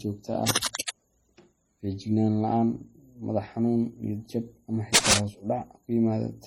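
From the start, the speech carries two layers of coding damage. This is likely transcoding between lossy codecs. The sound fits a low-rate MP3 encode, around 32 kbit/s, that was later re-encoded as HE-AAC at a similar rate. The second codec spent its few bits on the first one's artefacts and added its own. The top end stays dull. Smeared, watery detail and swishy high-frequency texture sit together throughout.

Cable scratch noise appears at 0.46 s and lasts until 0.90 s. It sounds like dense, ragged rustling laid over the speech, about as loud as the speech itself. It returns from 4.94 s to 5.20 s, just after "xanuun niyad jab ama" and before "hoos u". This time it is slightly louder than the speech. The scratching is likely a worn cable or connector being moved, so its contact resistance jumps about quickly.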